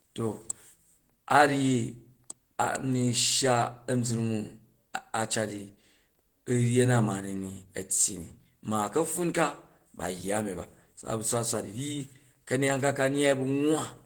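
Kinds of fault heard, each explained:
Opus compression: the speech carries a muffled, hoarse quality with grainy, rough texture throughout, likely from a low-rate Opus encode in its hybrid speech mode, around 16 kbps. Unlike MP3 damage, there is little swirling or hollow warble; band content is filled rather than dropped.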